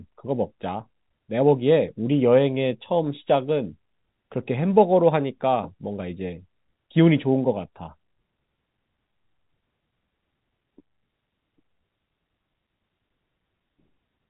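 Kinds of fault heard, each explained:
No faults can be heard in this speech clip. It carries the narrow band of G.711 telephone coding, with nothing passing above about 3.8 kHz.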